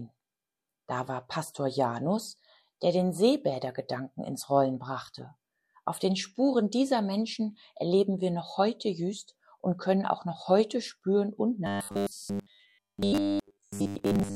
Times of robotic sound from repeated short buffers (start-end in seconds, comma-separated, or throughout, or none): 11.67-14.36